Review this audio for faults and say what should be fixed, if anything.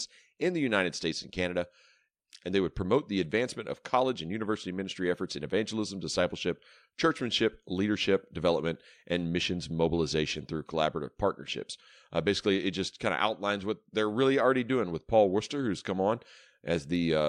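Nothing here needs fixing, since no faults turn up anywhere in this speech clip.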